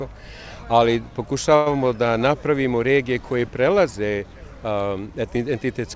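From 1.56 to 1.77 s the sound stalls in a call audio freeze, likely caused by packets held up in transit so the jitter buffer ran dry. For about 100 ms the receiver stretches the last sound into a fading buzz or hiss, then the audio resumes exactly where it stopped, so nothing is lost and the rest is pushed later. On a waveform the envelope decays smoothly with no true dropout. A spectrogram shows a smeared, repeating band that thins before normal detail returns. Above 8 kHz the spectrogram is empty throughout, which fits the G.722 codec at 64 kbps.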